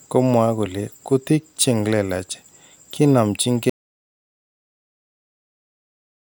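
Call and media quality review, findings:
Audio dropout to silence, 3.70 s to end of clip (about 2.5 s). Speech cuts mid-flow to silence with no room tone, unlike a noise gate's gradual fade. Likely a lost input or stray mute while the recorder kept writing silence.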